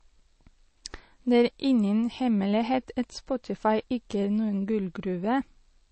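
The encoder was likely starved of bits by MP3 compression, at a rate that points to something as low as 32 kbps, so it discarded the top of the spectrum and dropped quieter frequency detail. From start to finish the speech has nothing above about 8.3 kHz, which dulls the s and t sounds, and the damage is plainly audible: a watery, swirling texture where weak components flicker between frames, with consonant attacks smeared.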